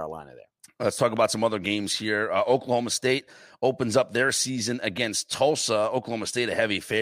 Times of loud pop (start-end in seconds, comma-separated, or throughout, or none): 1.17-1.19